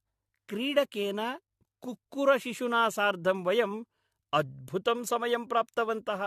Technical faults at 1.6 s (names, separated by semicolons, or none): generation loss